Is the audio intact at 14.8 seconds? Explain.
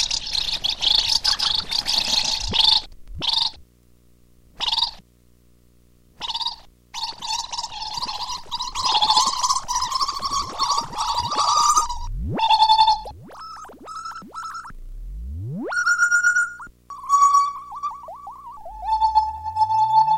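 No. Video or display buzz runs throughout, including at 14.8 s. A screen or video cable is coupling into the audio path, leaving a steady 60 Hz buzz at the picture's field rate with hash above it, sitting roughly 35 dB below the main signal.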